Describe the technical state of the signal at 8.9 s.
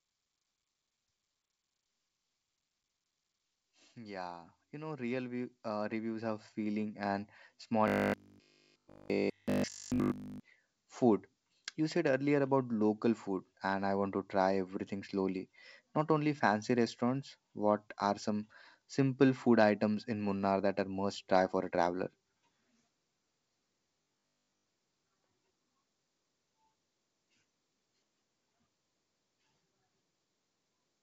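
At 8.9 s the signal carries a robotic sound from repeated short buffers, lasting from 7.88 to 10.40 s. The sound becomes a rigid, metallic buzz at 50 Hz, likely from the same 20 ms segment being replayed continuously while the incoming audio is skipped.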